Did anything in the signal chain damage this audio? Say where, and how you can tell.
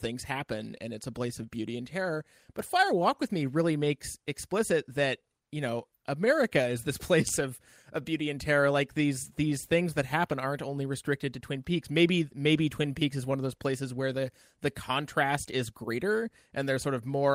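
Yes. The damage is at the network and jitter-buffer stage, where a clock drift between sender and receiver is at work. The sender's clock runs about 2% slow, so the buffer keeps draining. Unlike packet loss, this produces no bursty dropouts, only small hiccups recurring unevenly across the speech.

The receiver answers with repeated timing corrections from 0.33 s to 17.17 s, repeating short slices so playout runs at 98% and the speech gains roughly 300 ms overall. Random jitter would shift timing both ways, but these edits all lengthen, unevenly spaced.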